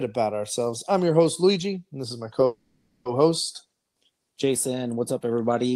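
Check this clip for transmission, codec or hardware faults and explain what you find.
There is a call audio freeze from 2.45 to 3.07 s, after "and this is my": delayed packets likely emptied the jitter buffer. About 0.6 s of the last sound is held and fading, then speech resumes with nothing lost.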